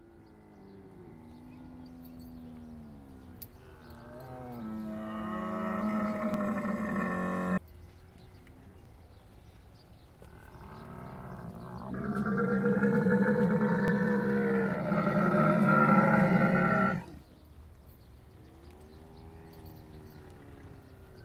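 Overlapping chunks mark every join in this everyday-sound recording. The audio was handled in 2.5 s chunks, each starting about 13 ms before the previous one ended, so that sliver plays twice. It sounds like a brief click or stutter at 1.32, 3.83 and 6.34 s.

At 7.57 s the playback skips ahead. Roughly a second and a half of audio was discarded while later material was already queued, and the two sides are spliced with no fill. The sound jumps abruptly from one moment to a later one.

Jitter buffer speed-up follows from 7.67 to 9.16 s. To bring the excess delay down, the receiver repeatedly removed short pitch-period-length pieces, roughly 200 ms in total. Playback runs at about 116% of normal speed with the pitch unchanged, so the sounds come across as hurried.

The overlapping-chunk stutters continue at 8.85 s, inside the sped-up stretch, and then at 11.37, 13.88, 16.39 and 18.91 s. They keep the same 2.5 s spacing and the same roughly 13 ms doubled segment at each join.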